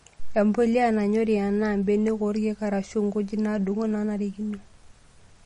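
Throughout this speech recording the top end stops dead at about 10.6 kHz, and the remaining sound has a plainly audible watery, swirling quality, with s sounds turning metallic and chirpy and consonant attacks smeared. That points to MP3 compression, likely at a low bitrate around 40 kbps, where the encoder runs short of bits, cuts the treble at a fixed frequency, and zeroes quieter frequency lines so they flicker on and off from frame to frame.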